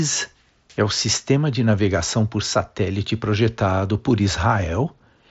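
Nothing in this speech clip stood out as a technical fault on listening.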